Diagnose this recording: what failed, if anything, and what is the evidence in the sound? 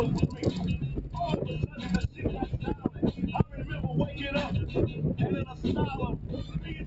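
The level keeps swinging by around 10 dB. Sustained parts and tails sink while attacks come through. This is a noise suppressor applied to music or sounds at the call-processing stage: built for speech, it treats steady material and ambience as noise and pulls it down.

At 2.76–2.99 s the sound drops by about 6 dB, and at 6.45–6.72 s by about 5 dB, each for roughly a fifth of a second. This is sound cut by the noise suppressor, which judged these stretches to be noise and attenuated them beyond the rest.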